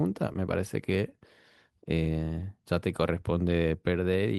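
A brief smear at 0.33 to 0.36 s is short concealed packet loss: about 10 ms of speech arrived too late, and the receiver extrapolated over the gap.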